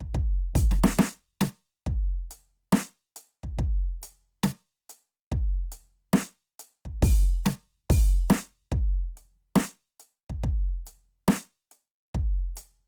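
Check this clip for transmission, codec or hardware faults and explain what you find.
One codec fault is present across the whole music clip.

Opus compression, throughout: each band keeps its overall energy, but with too few bits the fine detail is refilled by folding lower bands or injecting noise, so tones come out plainly grainy and rough rather than swirly. Content still reaches about 20.2 kHz; the likely cause is music-mode Opus at roughly 24 kbps.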